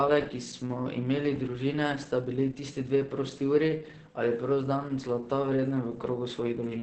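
Throughout, the speech is muffled and hoarse and empty above 8.7 kHz, a hard ceiling on a spectrogram. The likely cause is heavy Opus compression in speech mode, consistent with about 12 kbps.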